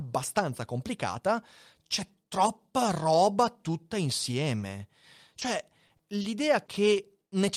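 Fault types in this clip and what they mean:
Short stall from a late packet: A packet arrived after it was due, and the jitter buffer ran empty. The receiver held the last sound for 20 ms until the packet came, then carried on from the same point. Nothing is lost, but the sound lingers too long. This happens twice, at 4.59 s and 6.22 s. Each stall pushes everything after it 20 ms later, so the two together add 40 ms.
Short concealed packet loss: Twenty milliseconds of audio never reached the decoder in time. The receiver bridged each hole by extending the last sound, following its pitch where voiced and using shaped noise where not, then blended back into the real signal. Each gap is heard as a brief smear. There are five, at 5.39, 5.87, 5.97, 6.66 and 6.94 s, so 100 ms goes missing in total. The gap at 5.87 s also adds a few milliseconds of timing shift.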